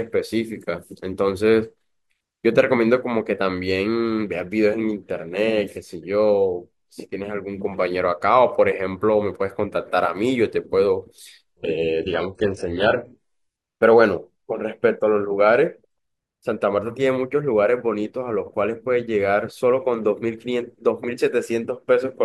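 From 11.57 to 13.57 s the speech drops abruptly to an adaptive stream at a lower bitrate, then returns just as suddenly, with no gap either side. For two seconds codec artefacts build. That fits a switch from AAC-LC at 96 kbit/s to low-rate HE-AAC around 12 kbit/s. On a spectrogram the upper band cuts off or becomes smeared, patchy replicated energy, while the waveform stays continuous.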